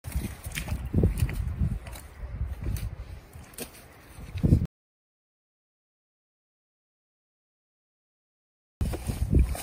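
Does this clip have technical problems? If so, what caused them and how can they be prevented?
Yes. An audio dropout to silence runs from 4.65 to 8.81 s, about 4.2 s of silence. The likely cause is a lost input link. Secure cables and monitor input levels while recording.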